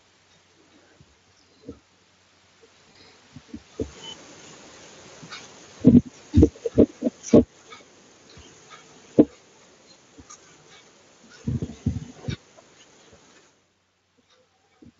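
At 1.37 to 1.39 s and again at 2.91 to 2.96 s, the speech shows VoIP packet loss concealed by the speech codec. About 20 ms of audio goes missing at the first point and about 40 ms at the second. The decoder fills each gap by carrying its last pitch and spectral shape forward at falling gain. What you hear is a brief buzzy or noisy smear that fades, not silence or a click, and the second one is longer. Because the decoder rebuilds each frame from the previous one, the voice also sounds weak or off for a short while after the packets return. That lingering after-effect separates it from a plain dropout. It also differs from the constant light coding damage of the Speex codec, because it is confined to these two moments.

From 5.72 s the automatic gain falls by about 6 dB and settles by 7.5 s. The control judged the input too loud, or its background noise too strong, and pulled its gain down gradually. 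Inside that stretch, from 5.93 to 6.32 s, the automatic gain rises by about 4 dB. That is a short upward correction, with level swelling over a fraction of a second before the overall decline continues. In both cases the room noise rises and sinks in step with the voice. That shared movement shows the level changes come from the gain control. A talker moving relative to the microphone, as happens near 3.5 s and 13.5 s, changes only the voice level and leaves the background steady.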